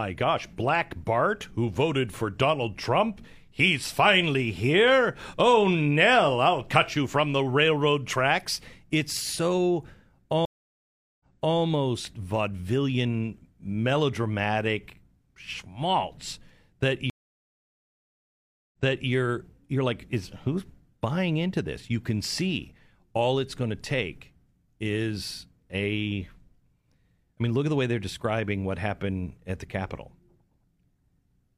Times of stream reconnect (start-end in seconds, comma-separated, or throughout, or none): 10.45-11.57, 17.10-19.10